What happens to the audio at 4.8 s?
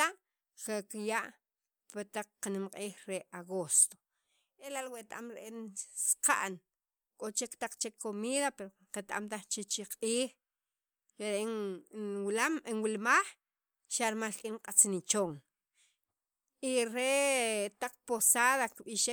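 Nothing goes wrong at 4.8 s; the audio is intact at that moment.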